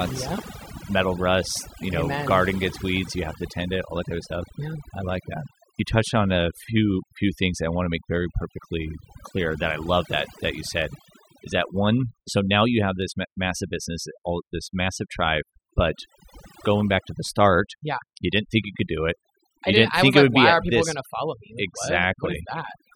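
From the first moment the speech carries overdone noise removal: an overly aggressive reducer has gated bands near its noise estimate, leaving near-silent gaps sprinkled with twinkling specks. A spectrogram shows a ragged, blotchy floor with isolated bright dots between phrases.

From 0.22 s to 22.92 s a faint, regular ticking, roughly every 0.15 s and around 150 in all, marks clock slip clicks. A single sample is being dropped or repeated, likely because two unsynchronised clocks differ by around 150 ppm. The waveform shows tiny discontinuities, and the spectrogram shows evenly spaced thin vertical lines.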